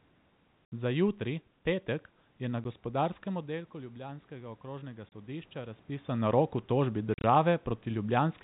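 Packet loss filled with silence cuts hard-edged holes at 0.66 s (70 ms), 2.64 s (10 ms), 5.09 s (30 ms) and 7.14 s (80 ms scattered over 100 ms). The gaps are multiples of 10 ms, which fits 10 ms packets. From 3.47 to 5.9 s, automatic gain rising lifts the voice and room noise together by about 5 dB. The shared swell separates it from the talker moving, which changes only the voice.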